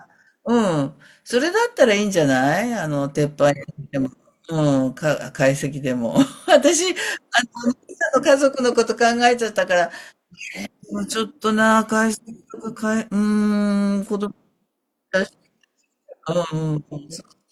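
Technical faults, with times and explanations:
12.44 s, gap between stream segments: a 3 ms hole of silence with hard edges, where the time stamps of two segments, which fit 6-second segments, fail to meet and the player pads the join. Unlike a dropout, nothing is removed, so the sound resumes intact rather than skipping ahead.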